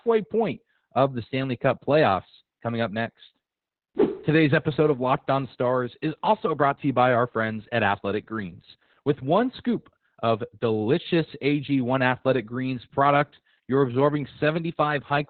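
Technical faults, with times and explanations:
Throughout, Opus voice compression: the speech is heavily coded, with nothing above about 4.4 kHz, so consonants lose their edge and the sound turns muffled and boxy. The narrowband linear-prediction mode rebuilds each frame from a coarsely coded excitation signal, which gives voicing a hoarse, slightly robotic buzz. The depth of the band limit and the roughness point to a very low bitrate, which fits something near 8 kbps.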